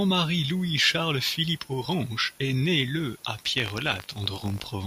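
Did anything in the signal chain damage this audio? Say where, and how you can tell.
Yes: buffer tearing at the driver/buffer stage, where writer and reader crossed, splicing audio roughly 70 ms old into each period. This caused a 50 Hz buzz from 3.56 to 4.7 s, after "est né le à".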